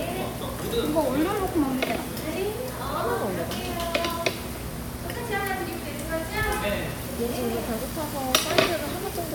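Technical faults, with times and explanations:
No technical faults are audible.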